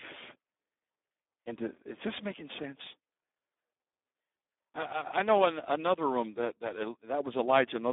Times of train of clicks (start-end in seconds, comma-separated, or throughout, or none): none